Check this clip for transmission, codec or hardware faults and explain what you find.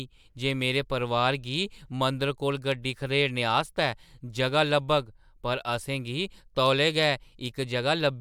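One hardware fault is present: sample clock jitter, from 3.55 to 6.09 s. In that stretch the converter's clock wanders by somewhere under a microsecond. Each sample lands slightly early or late. The resulting error tracks the slope of the waveform, so steep, bright parts of the speech suffer most. The error sits roughly 45 dB below the signal. It is heard as a faint hiss or roughness that rises on loud, sibilant sounds and disappears in pauses.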